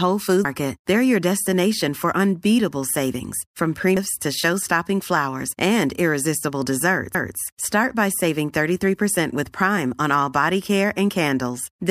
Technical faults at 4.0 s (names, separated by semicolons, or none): CD skip